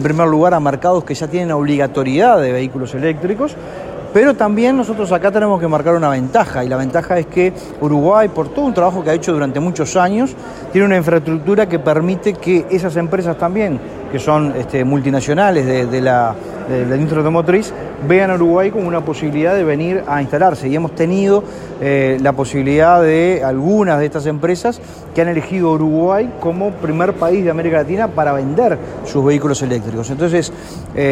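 GSM signalling bursts appear from 6.90 to 7.86 s, lasting just under a second: a galloping dit-dit-dit of short buzzes pitched at about 217 Hz, sitting roughly 25 dB below the main sound. The pattern points to a nearby 2G handset exchanging brief signalling bursts with the network. The recording circuit has picked up that radio energy and rectified it, turning the pulse rate into audible buzz.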